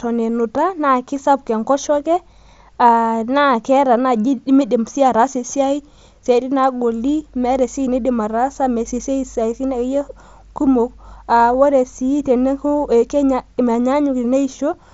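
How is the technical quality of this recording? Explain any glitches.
No glitches or faults heard.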